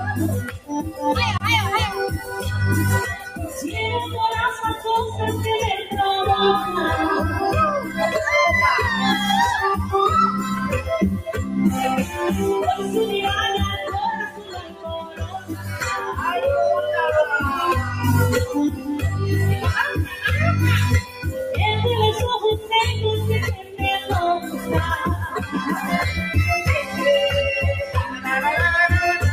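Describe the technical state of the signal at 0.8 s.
At 0.8 s the sound is sinking: held or fading material drops away, dipping by as much as about 15 dB, so the level thins and the tail is cut short while any sharper onsets would still come through. This is sound cut by the noise suppressor, spanning 0.44 to 1.02 s, with the attenuation biting for roughly 400 ms of that stretch. The suppressor judged this steady, decaying content to be background noise and pulled it down harder than the surrounding audio.

That dip sits inside a broader problem: a noise suppressor applied to music or sounds, active across the whole clip. Its gain keeps shifting by around 10 dB, so the audio pumps and flutters rather than holding a stable level. A processor tuned for speech treats sustained tones, ambience and reverberant decay as noise and turns them down, while transients pass through.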